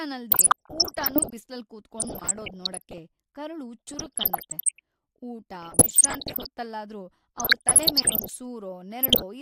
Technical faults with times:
0.32-1.33 DAB burbling
1.99-2.98 DAB burbling
3.87-4.79 DAB burbling
5.62-6.47 DAB burbling
7.38-8.38 DAB burbling
9.03-9.22 DAB burbling

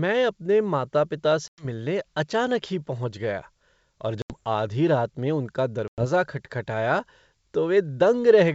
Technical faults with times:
1.48-1.65 packet loss on an ADPCM call
4.22-4.33 packet loss on an ADPCM call
5.88-6.05 packet loss on an ADPCM call

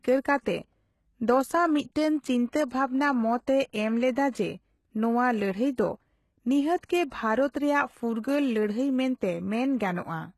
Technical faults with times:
0.00-10.38 HE-AAC compression
0.42-0.46 pre-echo

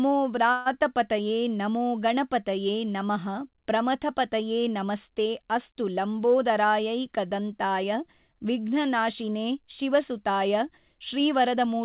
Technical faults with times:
0.52-0.68 call audio freeze
6.35-6.65 jitter buffer speed-up
11.17-11.63 jitter buffer speed-up

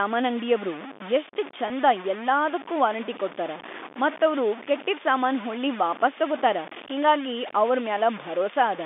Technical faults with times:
0.00-8.86 low bit depth without dither
1.68-1.70 packet loss with pitch repetition

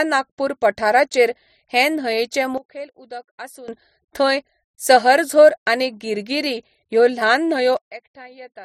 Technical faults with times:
2.58-3.68 sudden gain jump
7.77-8.65 sudden gain jump

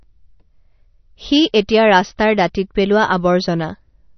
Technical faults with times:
0.00-4.18 MP3 compression

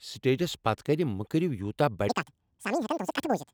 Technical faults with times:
2.09-3.53 audio read two samples at a time (double speed)

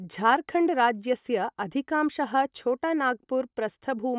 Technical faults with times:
none

